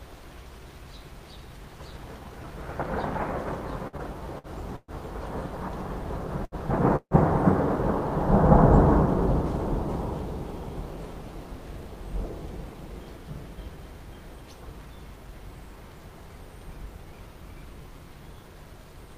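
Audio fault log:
3.87–4.91 s, repeated stalls (stutter): packets kept arriving late, so the jitter buffer emptied four times and the receiver stretched the last sound, at most 122 ms at once and 248 ms in all. The sound drags and stutters, with nothing missing.
6.44–6.55 s, short stall from a late packet: one packet missed its turn and the receiver held the last sound for 76 ms until it came. A sound lingers too long, then continues unbroken.
6.96–7.14 s, call audio freeze: packets were likely held up on the way, emptying the jitter buffer. A 150 ms gap is filled as the last sound carries on and fades, ending in 70 ms of silence, then the audio resumes where it stopped.
11.60–14.44 s, jitter buffer speed-up: the buffer had built up excess audio, so the receiver trimmed short pitch-period pieces, roughly 150 ms in total. The audio runs at 105% speed with unchanged pitch and sounds hurried.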